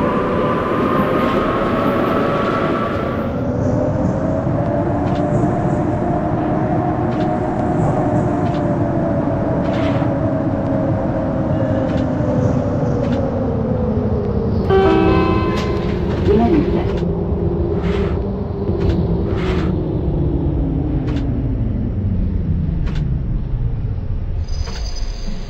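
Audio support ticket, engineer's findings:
No faults found in this clip. No defect to attribute to any component in the signal path.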